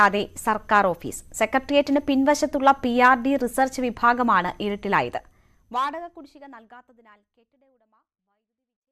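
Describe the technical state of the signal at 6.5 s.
At 6.5 s the audio is intact, with the level simply easing down partway through a smooth fade-out that begins around 5 s and runs to the end at 8.92 s, leaving no click or hard edge.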